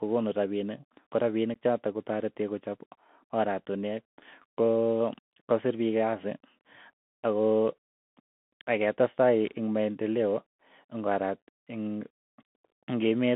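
From the start and throughout, the speech carries the sound of a Bluetooth CVSD headset codec. The band runs only from about 150 Hz to 3.5 kHz, so the audio is thin and boxy. The one-bit delta modulation, which fits a 64 kbit/s CVSD link, cannot track fast, loud high-frequency detail. Sibilants turn scratchy, peaks smear into distortion, and a grainy hiss sits beneath the voice. The damage is plainly audible.

At 1.54 s, unconcealed Bluetooth headset packet loss cuts a 15 ms hole into the speech, about the length of two lost packets. Nothing fills the gap, so the sound drops out abruptly with hard edges. At 9.18 s a shorter 7.5 ms dropout, consistent with a single lost packet, leaves the same hard-edged gap. After each, the speech comes back quieter for a moment.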